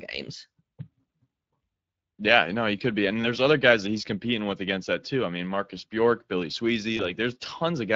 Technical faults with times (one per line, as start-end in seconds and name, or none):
0.00-7.95 Speex codec
6.97-7.04 VoIP packet loss concealed by the speech codec